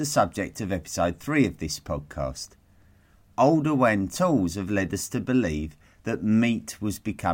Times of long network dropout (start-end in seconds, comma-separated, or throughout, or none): none